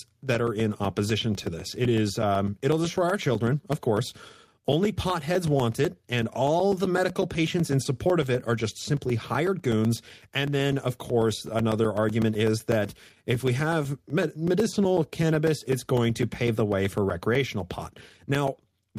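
From 0.10 s to the end, periodic USB or driver dropouts recur every 0.125 s. Something blocks the audio path eight times a second. Each time, a sliver of sound becomes silence. The result is a steady ticking, audible only while speech is present.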